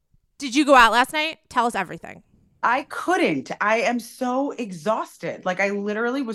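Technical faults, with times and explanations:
Listening to this speech recording, nothing stood out as a technical fault at any point.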